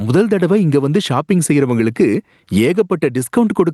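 Gain pumping runs through the whole speech clip. The level never settles. Each loud syllable pushes the overall gain down. In every pause the gain swells back up by roughly 15 dB. Loud and quiet passages sit unnaturally close together. The result sounds squashed and breathing. The likely cause is a microphone gain set far too high, with a fast limiter or compressor clamping each peak.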